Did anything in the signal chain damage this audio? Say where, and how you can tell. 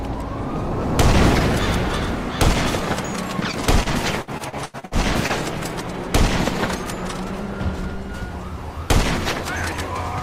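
Yes. Repeated packet loss (robotic sound) damages the audio at the network stage, from 3.51 to 5.31 s. Across that stretch the sound turns choppy as a string of short holes follows one after another, the longest about 81 ms. Packets were lost or arrived too late, and the receiver's concealment bridged each gap by extending the last sound it had. Roughly a fifth of the span is patched material, which gives it the robotic character.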